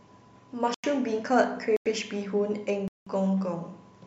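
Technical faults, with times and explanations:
0.74–0.84 s, 1.77–1.86 s, 2.88–3.07 s, block of digital silence: the speech cuts out and back with no fade for 93, 93 and 186 ms, lengths that fit unfilled 4096-sample output buffers. The waveform shows flat lines there; the spectrogram shows blank vertical bands.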